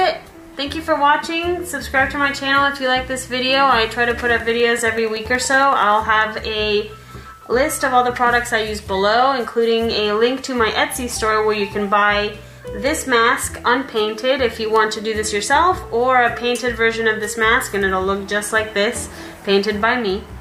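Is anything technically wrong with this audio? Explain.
Yes. From 4.11 to 5.93 s there is a train of clicks: likely interference pulses ticking regularly at 10.5 per second, seen as evenly spaced vertical lines on a spectrogram.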